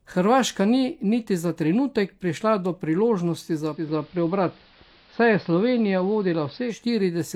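At 3.6 s, just after "trenutek prišla do priložnosti", the digital radio blends to analogue: the receiver lost its digital stream and cross-faded over about 325 ms to the station's AM broadcast. The highs narrow to AM's limited bandwidth and a steady hiss appears roughly 30 dB under the signal, while loudness holds. At 6.89 s it fades back to digital. The smooth fades at both ends, with no gap, set this apart from a dropout or a plain filter.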